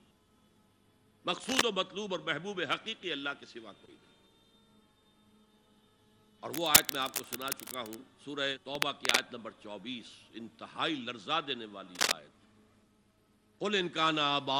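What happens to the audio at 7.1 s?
Cable scratch noise runs from 6.49 to 7.95 s: dense, uneven scratching bursts, somewhat louder than the sound itself, likely from a worn cable or connector shifting.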